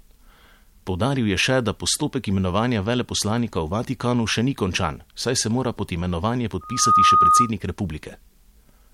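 A speech recording with a loudspeaker feedback squeal from 6.61 s to 7.51 s: a single 1.2 kHz tone swells over roughly a third of a second until it sits around 10 dB above the speech. The microphone was picking up the loudspeaker it fed, and at 1.2 kHz the loop gain passed one, so that frequency fed on itself. A spectrogram shows one bright horizontal line at 1.2 kHz, and the waveform shows a swelling, dense block.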